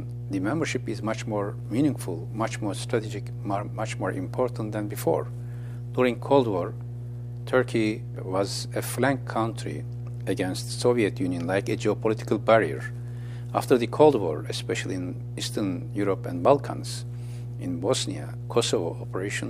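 Mains hum at 60 Hz runs throughout, loud at roughly 10 dB below the signal; unlike broadband rumble, it is a steady pitched tone, likely from a ground loop.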